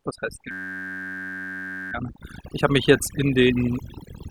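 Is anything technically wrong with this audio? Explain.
Yes, there are two problems. Right after "was heißt", from 0.51 to 1.92 s, there's a system hang loop: the machine or driver froze while the sound hardware kept cycling one 10.67 ms chunk, which fits a 512-sample buffer. Looping that fast turns it into a steady buzz at about 94 Hz.

Throughout the clip there's also overdone noise removal. The denoiser was set too strong, so it pulls individual frequency bands down or out whenever they sit near its noise estimate, taking quiet bits of the speech too. The background drops away and breaks into twinkling, warbling specks.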